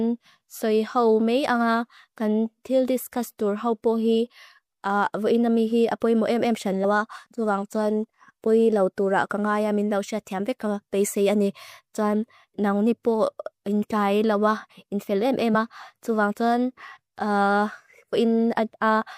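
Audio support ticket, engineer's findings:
Compressed frames skipped at 6.83 s (about two 26.1 ms frames, roughly 50 ms lost) and 15.53 s (about one frame, before "ma tu vang soan"). The decoder drops missing or damaged frames, and the overlap smears the join. Spectrogram shows an abrupt content jump with a soft smeared band, not a click spike.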